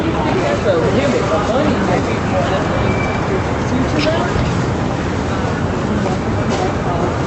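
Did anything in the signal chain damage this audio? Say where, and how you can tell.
No, nothing in these sounds stood out as damage from any stage of the chain, with the band limit of the call path at about 8 kHz being what that path normally does.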